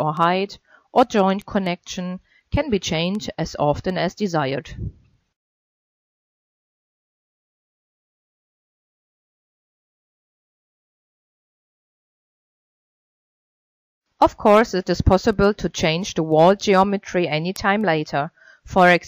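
Steady ticking runs through the whole clip, from 0.17 s to 19.06 s, recurring about every third of a second, some seventy in all, sharp and uneven in strength. These are word clock ticks: the receiving device is running on its own clock, not locked to the digital source, and the two drift apart by something on the order of 100 ppm. Each time they slip past one another, a single sample is dropped or repeated. Random dropout clicks arrive irregularly. These keep a strict, even spacing.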